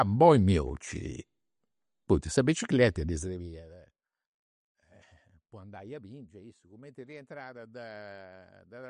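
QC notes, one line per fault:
Throughout, MP3 compression: the speech is plainly watery and swirly, and nothing is present above about 11.1 kHz, which fits a likely MP3 encode near 48 kbps. Short of bits, the encoder zeroes weak frequency lines that flicker frame to frame and cuts the treble.
3.09–3.76 s, zipper noise: just after "poita sa bicicreta" the level drops by roughly 20 dB in unsmoothed steps, around 200 per second. Each step puts a small click in the signal, so the fall is heard as a ticking zip riding on the speech.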